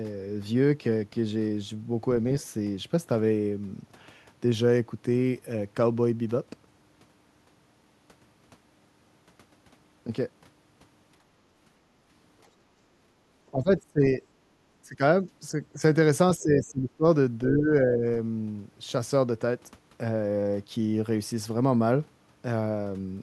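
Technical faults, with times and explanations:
13.52 to 18.05 s, speech suppressed in double talk: the speech ducks in five bursts, at 13.52–14.22, 14.83–15.01, 15.74–15.79, 16.37–17.04 and 17.49–18.05 s. The drops are deepest in the first, about 25 dB, and fourth, about 20 dB, and only slight in the brief third. The likely cause is an echo canceller that, with both sides talking, could not tell this talker from loudspeaker echo and attenuated everything.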